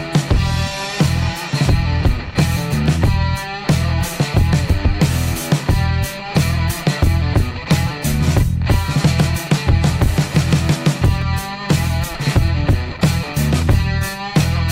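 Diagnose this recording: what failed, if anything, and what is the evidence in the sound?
Clock drift buffer slips, 1.18 to 14.56 s: clicks every 1.67 s, likely from device clocks about 200 ppm apart making the buffer drop or repeat samples.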